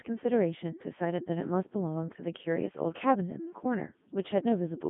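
A speech clip, damaged from start to finish by the Codec 2 vocoder. The voice sounds robotic and buzzy. The decoder never kept the original waveform. It rebuilt the voice from sine waves, using only pitch, voicing, energy and a rough spectral envelope. The damage is heavy, though the detail fits the top 3.2 kbit/s mode. The band runs from 150 Hz to 3.5 kHz. Nothing is left above 3.7 kHz.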